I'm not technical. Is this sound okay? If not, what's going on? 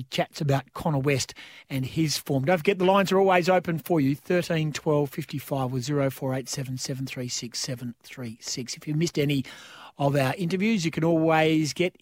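Yes, this recording is fine. There's nothing technically wrong to point to anywhere in it.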